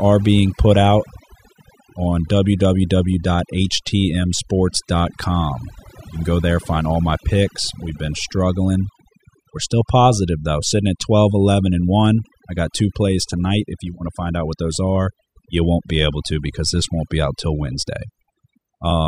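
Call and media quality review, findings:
Overdone noise removal, throughout. Background pulled down and broken up into twinkling specks. Probable component: noise suppressor set too strong, dropping frequency bands near its noise estimate along with quiet speech detail. Unlike a noise gate, the effect is per band, not on/off.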